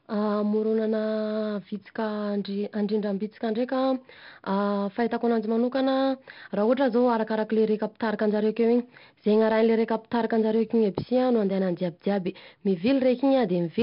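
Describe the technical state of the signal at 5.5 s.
At 5.5 s the speech passes through 4-bit ADPCM compression, as it does for the whole clip. Each sample is coded as a coarse step from a prediction, so the error rides with the level as a gritty hiss on louder sounds and heavy distortion on sharp onsets. Nothing above about 5.3 kHz remains, which fits a low sample rate near 11 kHz and dulls the sound.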